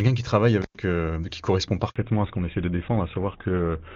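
Intermittent contact at 0.62 to 0.77 s: a loose plug or cable opens for about 105 ms, dropping the speech out with crackle at both edges.

Handover gap at 1.90 to 1.96 s: while the call switched networks no speech frames arrived, so the audio falls silent for 60 ms.

Fallback to narrowband from 1.96 s onward: the call leaves AMR-WB at 23.85 kbit/s for GSM full rate at 13 kbit/s. Nothing above 4 kHz survives, so the voice turns duller and rougher.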